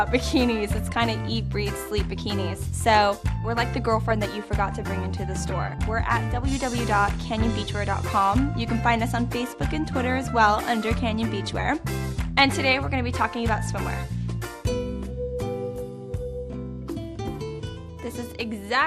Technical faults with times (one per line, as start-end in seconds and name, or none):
0.00-18.87 MP2 compression